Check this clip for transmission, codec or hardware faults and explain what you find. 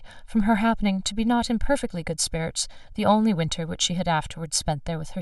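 There's one fault, and it runs the whole way through this speech. Channel delay (comb filtering): one channel lags by roughly a millisecond and a half, so the mono sum cancels at evenly spaced notches from around 400 Hz upward, leaving everything hollow and phasey.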